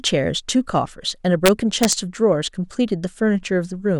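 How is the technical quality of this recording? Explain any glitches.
The recording has one clear fault, an integer overflow between 1.46 s and 1.93 s in the speech. Over that stretch the level was pushed about 1 dB past the integer ceiling, and instead of being held at full scale, the peaks that crossed it wrapped around to the opposite extreme of the range. Each of those peaks jumps across the full range at once, so the loudest parts of the speech there break into harsh, violent cracks, much sharper and more abrupt than ordinary clipping.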